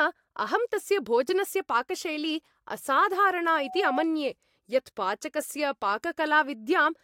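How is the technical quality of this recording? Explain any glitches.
The recording has one clear fault. From 3.57 to 4.06 s, loudspeaker feedback squeal appears. A 749 Hz tone swells over about a third of a second until it matches the speech in loudness. The microphone is re-amplifying its own loudspeaker output.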